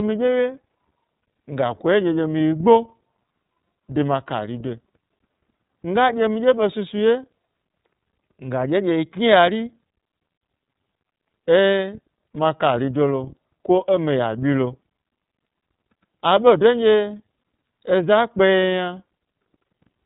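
The whole clip carries iLBC codec damage. Nothing passes above about 3.8 kHz, and each 30 ms frame is coded alone, leaving the speech plainly rough and synthetic, likely at 13.33 kbps.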